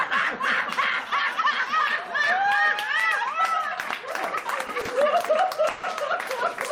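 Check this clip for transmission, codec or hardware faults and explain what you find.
Two network timing faults are present, both late in the clip, and neither removes any audio.

A short stall from a late packet occurs at 4.85 to 4.90 s. A packet missed its playout time and the jitter buffer ran dry, so the receiver held the last sound for about 30 ms until the packet turned up, then resumed from the same point. The sound briefly sticks with a slight buzz or dip, and everything after it plays 30 ms later.

A call audio freeze follows at 5.70 to 5.85 s. The sound stops moving forward and the last fragment is extended for about 130 ms as a fading buzz or hiss that never drops to silence. Its likely cause is packets held up in transit, emptying the jitter buffer while the receiver filled the wait. Once the packets arrived, playback picked up where it had halted, so nothing is lost and the rest of the clip runs a further 130 ms behind.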